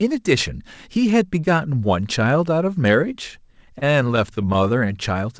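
It's a speech clip that went over a call link, and the top end stops around 8 kHz, which points to a wideband codec along the lines of G.722. From about 3.66 to 4.67 s there's repeated stalls (stutter): packets arrived late, the jitter buffer kept running dry, and the receiver stretched the last bit of sound to bridge each wait. There are eight short holds, the longest about 23 ms, adding up to roughly 90 ms. Nothing's actually lost, but that stretch drags and hiccups.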